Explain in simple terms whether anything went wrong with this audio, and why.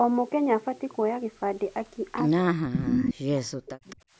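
Yes, something goes wrong near the end. From 2.41 s to 4.01 s the voice keeps dipping and nearly vanishing, cut away for about a second and a half in total. This is speech suppressed in double talk: both sides were likely talking at once, and the call's echo canceller, unable to tell the talker from the loudspeaker sound, turned everything down.

Over the same stretch, a copy of the voice arriving 216 ms late comes back: loud from 2.73 s to 3.13 s, then a faint scrap at 3.9 s. This is echo leak, likely caused by one side's loudspeaker sound reaching its microphone and not being fully removed before being sent back.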